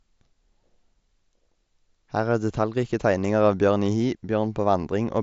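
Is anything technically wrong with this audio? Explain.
No, nothing stood out on listening to this speech, which comes through a Bluetooth mSBC headset link with its top end stopping near 7.7 kHz.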